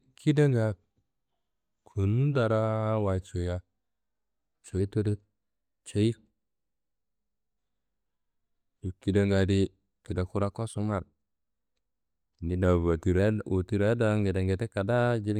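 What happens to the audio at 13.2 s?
At 13.19 s the speech returns to normal speed and pitch, ending a drift correction step that began at 12.64 s. For just over half a second the audio ran about 6% slow and sat roughly 110 cents flat, a little more than a semitone down. This is likely clock-matching software briefly changing the playback rate to rebalance its buffer. Unlike tape wow, which wobbles continuously, this shift holds one steady offset and then returns.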